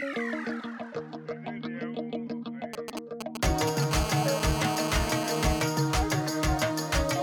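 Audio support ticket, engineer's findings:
GSM signalling bursts, 2.74 to 3.93 s: galloping dit-dit-dit ticks with short buzzes, a few dB below the signal. A nearby 2G phone's radio bursts are rectified by the audio circuitry. Spectrogram shows intermittent vertical stripes and 217 Hz harmonic ladders; waveform shows spiky clusters.

GSM phone buzz, 3.93 to 5.62 s: hard, raspy continuous buzz at about -6 dB relative to the signal, consistent with a handset in a call. The circuitry demodulates its 217 Hz TDMA bursts. Spectrogram shows a dense 217 Hz harmonic comb; waveform shows a regular square-edged pulse train.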